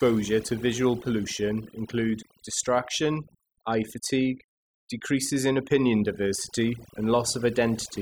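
Throughout the speech, overdone noise removal is audible: the noise reduction was set too strong, pulling individual frequency bands down or out whenever they sat close to its noise estimate. Quieter parts of the voice vanish with them, leaving the voice over near-silence flecked with twinkling specks.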